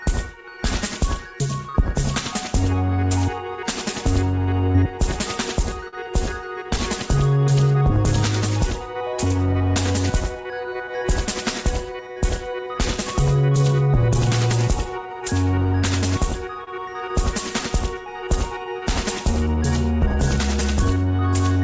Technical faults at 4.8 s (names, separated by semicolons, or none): short concealed packet loss